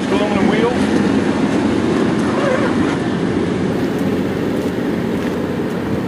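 From 3.72 s to the end there's imaging from sample-and-hold upsampling: a bright, metallic fizz that rides along with the sound's level. It points to a jump from 24 kHz to 44.1 kHz done by simply repeating samples with no smoothing filter, so mirrored copies of the spectrum land in the 12 to 24 kHz band, sitting about 29 dB below the sound itself.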